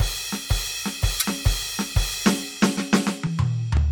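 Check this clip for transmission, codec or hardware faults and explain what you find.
Two faults stand out in this music clip.

From 1.19 to 1.25 s there is a brief garbled stretch where the music jumps ahead, likely a broken MP3 bit reservoir. After missing frames, the next ~26 ms frames fetched data from the wrong bytes.

From 2.77 to 3.77 s, periodic USB or driver dropouts cause a regular tick every 0.5 s, about three in total. Each time, the audio stalls and roughly 2 ms is replaced by silence. The waveform shows evenly spaced flat gaps, and the spectrogram shows thin vertical lines.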